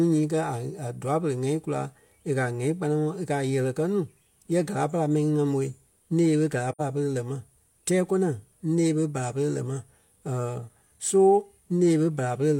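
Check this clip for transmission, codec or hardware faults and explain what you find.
One codec fault is present in the speech. At 6.71 to 6.81 s there is AAC frame loss with muting: the decoder zeroed the missing spectrum, and overlapping windows fade the sound out and back in, leaving a soft-edged 85 ms hole, consistent with two lost frames.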